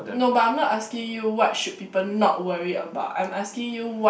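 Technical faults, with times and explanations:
No technical faults can be heard in this recording.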